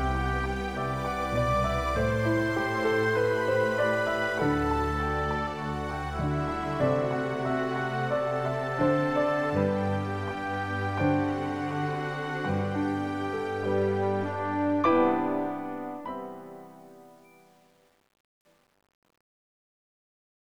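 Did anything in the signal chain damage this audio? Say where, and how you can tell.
Yes. Truncation distortion on the fade-out runs from 14.83 s to the end and is worst after 15.7 s. The gritty sound fits an undithered, roughly 9-bit volume stage.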